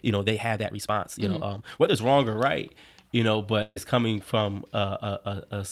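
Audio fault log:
0.0–2.0 s, time-stretched section: the opening runs about 1.5 times too fast and sounds rushed, then the pace drops back to normal just before "wrong or right you". The pitch stays unchanged, so this is not a faster playback rate. It is likely software squeezing the passage by dropping short pieces.
3.62–3.78 s, burst of packet loss: right after "or right you know", the last sound is carried on for about 140 ms and fades, then 20 ms of silence follows. The audio resumes about 140 ms further on, with that stretch missing. A plain dropout would be silent throughout, with no fading continuation of the previous sound.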